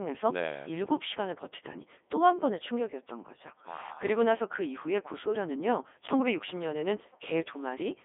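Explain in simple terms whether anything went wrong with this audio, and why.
Throughout the whole clip, the speech has been squeezed through the Codec 2 vocoder, a very low-rate digital-radio voice codec, and the damage is heavy. Rather than keeping the original sound wave, it sends only a rough outline of pitch, loudness and tone colour, then rebuilds the voice from simple tones. That is why it sounds robotic and buzzy. An ordinary phone line would also cut off everything above about 3.7 kHz, but the voice would still sound natural; here the voice itself has been resynthesised.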